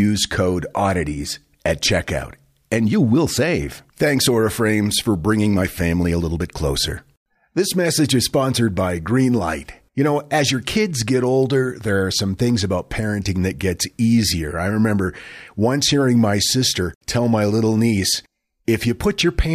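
Speech recording, no technical faults detected.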